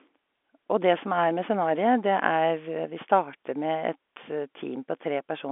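No technical faults can be heard in this speech, which carries the narrow band of an ordinary telephone line, roughly 250 Hz to 3.5 kHz with nothing above about 3.8 kHz, and the G.711 telephone coding leaves at most a faint trace of its own.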